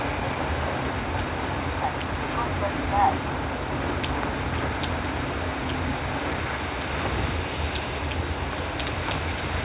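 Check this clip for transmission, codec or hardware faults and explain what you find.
No transmission, codec or hardware faults are audible anywhere in the clip.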